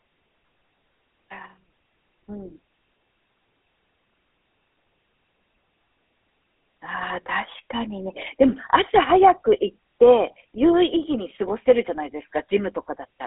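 From start to finish the speech carries GSM full-rate codec damage, plainly audible as a buzzy, gravelly roughness. The codec rebuilds the voice from a vocal-tract model driven by a sparse pulse train, which fits the 13 kbps full-rate coder. Nothing survives above 3.8 kHz, and the line band sits around 250 Hz to 3.6 kHz.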